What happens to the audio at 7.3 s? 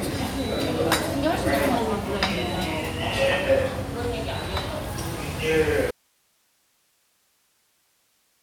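An audio dropout to a faint residue covers 7.3 s. It begins abruptly at 5.91 s and runs to the end of the clip. The wanted signal vanishes at that point, likely because the source was lost while the path after the break stayed live. At 7.3 s only a steady hiss remains, roughly 40 dB below the earlier level. The sound cuts out suddenly and never returns, with no pause-like settling or fade.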